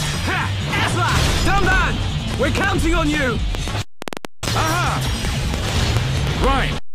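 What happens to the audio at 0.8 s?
Nothing goes wrong at 0.8 s; the audio plays through that moment intact, with no fault to be heard.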